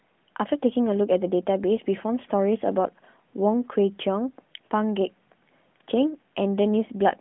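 No faults are present in the speech; the AMR narrowband mobile codec path at 12.2 kbps is working normally, passing nothing above 3.9 kHz.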